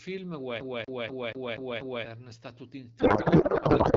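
CD stuck on one turn, 0.60 to 2.05 s: the speech jumps back six times, replaying the same 0.24 s segment with a brief mute at each skip, a rapid even stutter.

Codec payload misread, 2.99 s to the end: octet-aligned AMR is decoded as bandwidth-efficient, so the fields land in the wrong places and the speech turns into garbled noise and warble.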